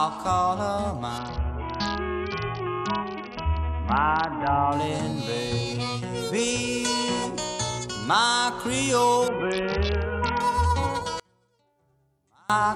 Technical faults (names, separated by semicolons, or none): Bluetooth SBC bit pool drop; one channel inverted